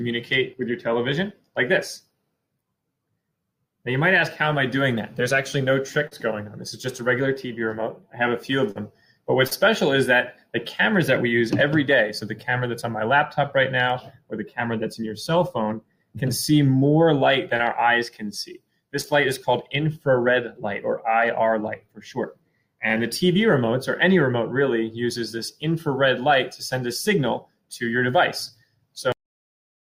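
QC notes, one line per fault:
6.07–6.13, 8.71–8.77, 9.47–9.53, 17.57–17.61, 19.01–19.05 s: short concealed packet loss. 40 ms each at the first three, then 20 ms each at the last two, went missing. The receiver extended the previous sound, leaving brief smears.
29.12 s: cut-off end. The final buffers never played. The sound halts mid-event and drops straight to digital silence, with no decay.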